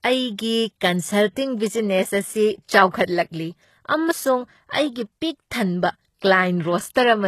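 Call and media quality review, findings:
Throughout: heavily degraded speech, gritty, metallic sibilants, synthetic-sounding treble, nothing above 12.3 kHz. Likely HE-AAC compression at a very low bitrate, consistent with about 16 kbps. Upper band rebuilt from copied lower bands, so harmonics misalign.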